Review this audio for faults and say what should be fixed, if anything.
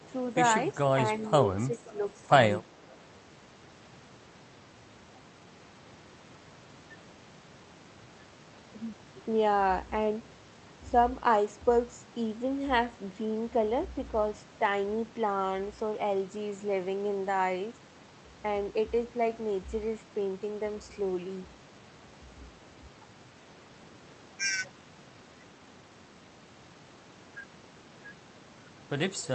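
Between 1.68 and 1.99 s the speech dips in level. The deepest drop is about 10 dB, and roughly 150 ms of that span is pulled down in uneven pieces. This is speech suppressed in double talk. The likely cause is the echo canceller mistaking this talker for loudspeaker echo while the far side was also talking. It then attenuated both. Prevent it by tuning the echo canceller's double-talk detection so near-end speech is held at full level.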